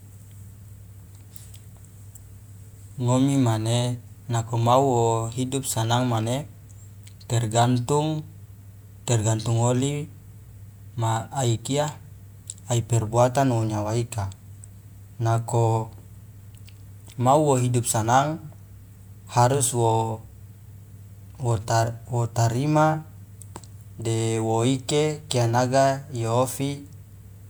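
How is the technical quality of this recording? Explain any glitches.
The speech recording has no audible technical glitches.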